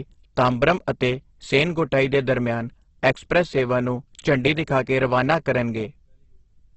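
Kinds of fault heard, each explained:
Opus compression: The speech is heavily damaged throughout, grainy and rough, with nothing above 8.2 kHz. Band energies survive, but bit-starved bands are filled with noise or folded lower content. That fits a likely low-rate Opus encode in CELT mode near 12 kbps.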